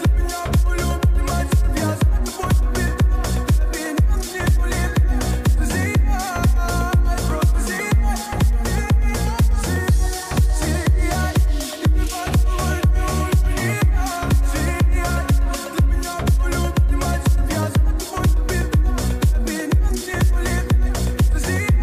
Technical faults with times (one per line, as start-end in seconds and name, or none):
none